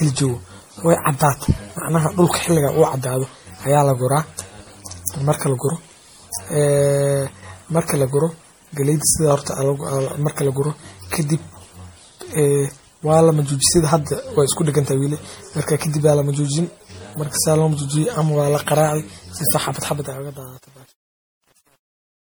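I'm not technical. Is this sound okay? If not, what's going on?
No. Throughout the speech there is generation loss: it sounds swirly, smeared and hollow, likely from being re-saved in a compressed format around seven times. From 19.79 s to the end there is truncation distortion on a fade. The smooth fade-out loses fine detail and turns gritty, worst from 20.27 s.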